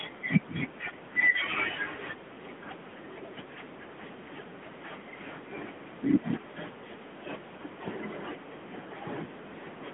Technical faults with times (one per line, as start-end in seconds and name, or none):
0.00-9.94 AMR narrowband mobile codec